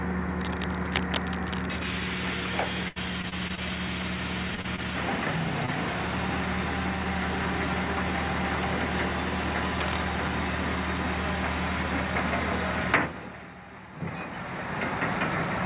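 Audio carried over a call link. Nothing is heard above 4 kHz, which fits G.711 mu-law at 64 kbps. Cable scratch noise appears from 0.39 to 1.79 s, nearly as loud as the signal. It returns more quietly from 9.54 to 9.98 s. Both are dense, uneven rustling bursts laid over the sound. The likely cause is a worn cable or connector being moved, so its contact resistance jumps about. Repeated packet loss (robotic sound) runs from 2.88 to 3.59 s. There are five gaps, the longest about 77 ms. About a fifth of that stretch is filled in by continuing the last sound. The result is choppy, with pieces missing. Short concealed packet loss follows at 4.55, 4.61, 4.76 and 5.66 s. Each time about 20 ms of audio never arrived. The receiver patched each hole by extending the preceding sound and then blended back. Each one is heard as a brief smear or wobble.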